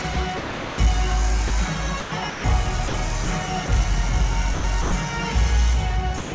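Sound chopped by the voice detector, 0.02–0.78 s: the sound breaks up repeatedly, with about 440 ms replaced by comfort noise. The likely cause is the sender's detector toggling transmission on and off.

Sound dropped by the voice detector, 1.48 s: a 20 ms slice gives way to steady comfort noise, likely because the detector briefly took the sound for background and stopped sending.

Sound chopped by the voice detector, 2.00–2.44 s: the sound turns choppy again, with about 260 ms swapped for synthetic fill. This likely comes from the same on-off switching.

Sound dropped by the voice detector, 2.88–2.94 s, 3.24 s and 3.66 s: short gaps of 60 ms, 20 ms and 20 ms are filled with comfort noise. The likely cause is the detector cutting transmission on quieter moments.

Sound chopped by the voice detector, 4.54–4.92 s: about 200 ms is replaced in fragments. This is likely the detector toggling once more.

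Sound dropped by the voice detector, 6.18–6.32 s: 140 ms is lost to steady comfort noise, likely because the detector judged the tail as background.

Throughout, the G.722 call path at 64 kbps carries nothing above 8 kHz.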